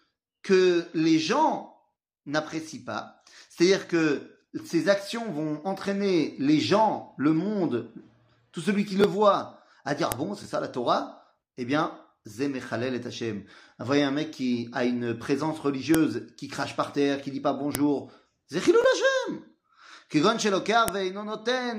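Sharp, loud clicks snap out at 10.12, 15.94, 17.75 and 20.88 s, each cutting straight through the sound. This is a file header played as audio: joined WAV pieces kept their headers, so those header bytes were decoded as samples at every join.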